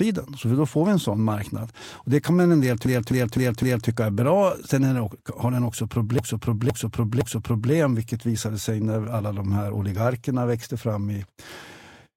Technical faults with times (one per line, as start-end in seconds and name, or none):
2.86-3.88 repeated frames
6.19-7.72 repeated frames